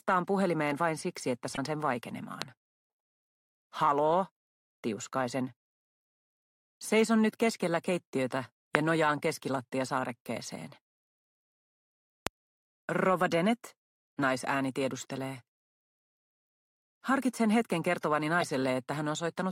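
A brief glitch breaks into the sound from 1.53 to 1.59 s. This is damaged data in a compressed stream. A stretch of the encoded data was corrupted, so the decoder misread those frames, lost its place in the stream and had to hunt for the next valid frame header. The short glitch comes from that resynchronisation.

Three sharp loud pops then land on top of the sound, which carries on beneath each one: at 2.42 to 2.44 s, about 20 dB above the surrounding level, and at 8.75 to 8.77 s and 12.27 to 12.29 s, each about 25 dB above it. Each is a single hard click-thump. The likely cause is a sudden voltage step or spike, from a plug, switch, static discharge or driver glitch, that was added to the signal and then shaped by the circuitry after it.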